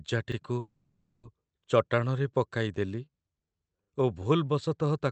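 At 0.32 to 0.36 s a repeated buffer plays a 40 ms stretch twice, as a short stutter with a hard join, visible as a duplicated waveform block with a vertical seam.

From 0.59 to 1.25 s there is a call audio freeze. About 640 ms of continued, fading buzz ends in roughly 10 ms of silence before the sound resumes with nothing lost. On a spectrogram this shows as smeared, flattened harmonics. The likely cause is delayed packets emptying the jitter buffer.

At 1.64 s the same 40 ms repeat recurs as another stutter.

From 1.87 to 4.87 s a jitter buffer slow-down repeats pitch periods, adding about 404 ms. The sound runs at 87% speed with unchanged pitch and drawn-out sounds. The waveform shows repeated identical cycles, and the spectrogram shows stretched but level harmonics.

At 3.84 s a final 40 ms repeated buffer stutters within that slowed stretch.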